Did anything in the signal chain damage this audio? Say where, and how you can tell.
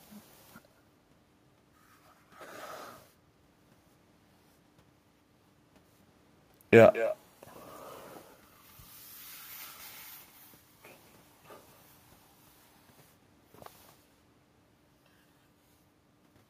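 Yes, at the call-processing stage. Between 6.93 and 7.16 s there's an echo leak: a faint copy of the speech trailing it by 220 ms, roughly 15 dB down. That's likely a far-end echo canceller letting some loudspeaker pickup slip back through.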